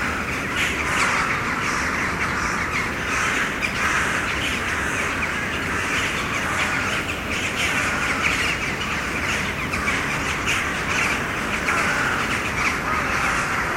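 It's a recording of everyday sounds, and right at the tail, from about 12.50 s through to the end, there's a drift correction step: everything abruptly slows by about 6.2% and drops roughly 110 cents, just over a semitone. That's likely clock-matching software yanking the playback rate in one jump to rebalance its buffer.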